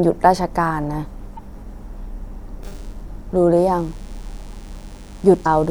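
At 1.35 to 1.39 s and 5.42 to 5.47 s, damaged data in a compressed stream makes the decoder lose sync. Each spot gives a brief chirp, squawk, click or short hole.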